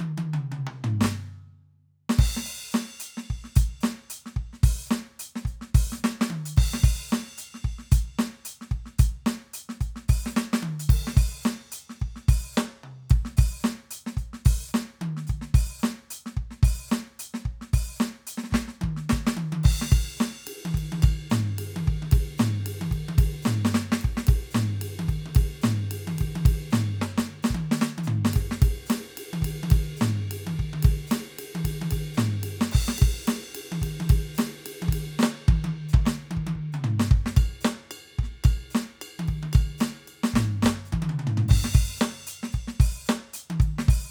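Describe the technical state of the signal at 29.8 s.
At 29.8 s the music plays through intact, with no technical fault present at that point.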